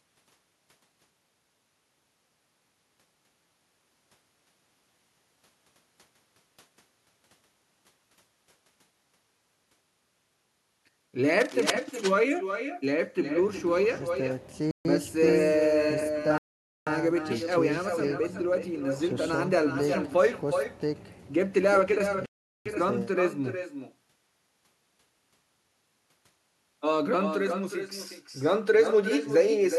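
All the way through, the speech carries an echo with no canceller: a thinner copy trails each phrase by roughly 0.4 s at about 7 dB down, as if the far end's speaker is leaking into its mic. From 11.4 to 11.7 s there's cable scratch noise, a ragged rustle only about 5 dB under the speech, likely from a worn connector being moved. Then come three short dropouts to silence at 14.71 s (140 ms), 16.38 s (about 490 ms) and 22.26 s (about 400 ms), each picking up again afterwards, likely a Bluetooth stall where the headphone buffer ran dry waiting on resent packets.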